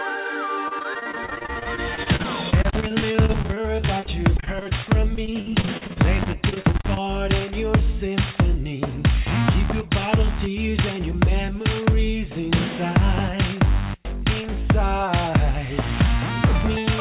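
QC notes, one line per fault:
0.68–4.73 s, repeated packet loss (robotic sound): the audio turns choppy. Dozens of short holes, the longest 40 ms, are patched by stretching the last sound. About a quarter of the stretch is filled this way.
5.15–7.04 s, repeated packet loss (robotic sound): the same breakup returns, with holes up to 46 ms. About 22% is concealed. The narrowband call path caps everything near 4 kHz.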